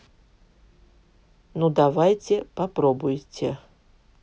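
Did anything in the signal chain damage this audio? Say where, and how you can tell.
Yes. At 1.78 s in this speech there is a single sharp click from dropped samples, likely a driver or buffer hiccup. A couple of samples, about a tenth of a millisecond, go missing, so the waveform steps abruptly and the spectrogram shows one thin vertical line.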